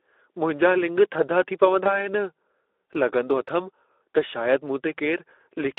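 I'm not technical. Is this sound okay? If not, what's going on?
No, not quite. The whole clip has been squeezed through the Speex codec, an older speech compressor used for internet calls and game chat. It's clearly audible: the speech sounds thin, phone-like and hoarse, because the codec keeps too little detail.

There's also VoIP packet loss concealed by the speech codec, from about 1.83 to 2.08 s, right after "थधा थी". A tiny slice of audio went missing, and the decoder guessed to fill the gap, so the sound is stretched out and fades, and the speech stays weak or distorted for a moment before it recovers.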